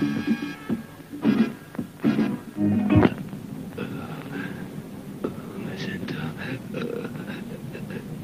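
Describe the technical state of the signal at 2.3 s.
At 2.3 s the signal is intact, with no audible dropout, distortion, glitch or other technical fault at that point.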